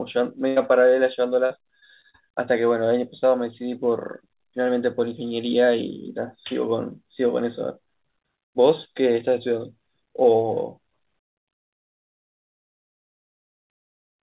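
At 0.48 s a burst of packet loss hits the speech. It lasts until 0.58 s. The receiver stretches the last sound for 82 ms and fades it. It comes out as a brief held buzz or hiss. About 80 ms of speech is skipped.

From 1.46 to 2.16 s there is repeated packet loss, with a robotic sound. Four separate gaps each get patched by extending the previous sound. The longest gap is 39 ms. About 120 ms goes missing in total. The speech turns choppy.

Throughout, nothing is heard above 4 kHz, which fits a narrowband G.711 call path.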